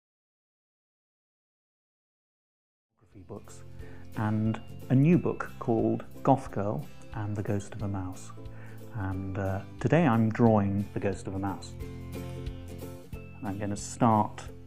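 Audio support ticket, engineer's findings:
No faults found; the smooth fade-in from about 3 s to 4.06 s is a normal editorial fade.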